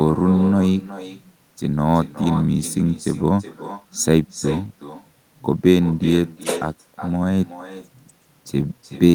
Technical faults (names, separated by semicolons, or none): echo with no canceller